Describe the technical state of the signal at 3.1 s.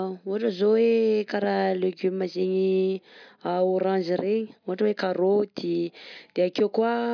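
At 3.1 s the speech signal is intact, with no dropout, distortion, glitch or other technical fault to be heard at that moment.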